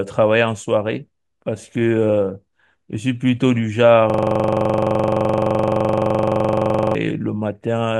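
A system hang loop runs from 4.10 to 6.95 s in this speech clip: one 42.67 ms slice of audio repeats exactly, about 67 times, giving a rapid mechanical stutter at 23.4 Hz in place of the speech. The computer or audio driver stalled while the sound hardware kept replaying the same ring buffer, and a loop of that length fits a 2048-sample buffer.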